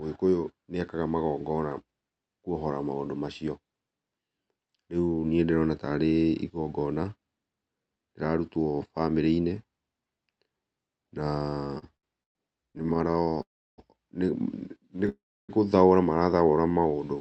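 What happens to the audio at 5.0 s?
Nothing goes wrong at 5.0 s: the speech passes through the call path intact at that point, with no dropout, glitch or distortion.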